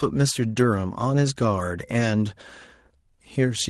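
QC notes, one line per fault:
0.47–0.61 s, lost packet rebuilt from error correction: the sound turns briefly rougher and noisier, with no gap. Several packets went missing. The decoder filled about 80 ms from the lower-bitrate backup copies carried in the following packets, which fits Opus in-band recovery.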